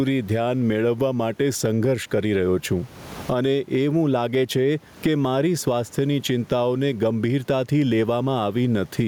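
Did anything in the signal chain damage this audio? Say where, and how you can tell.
Yes. Gain pumping runs through the whole speech clip: the room noise sits about 36 dB below the speech, and the gain swings by around 15 dB. The likely cause is input gain set far too high, with a fast limiter in call processing clamping each peak and squashing the dynamics.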